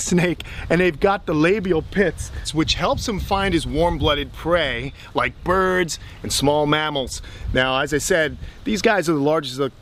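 No technical faults can be heard anywhere in this recording.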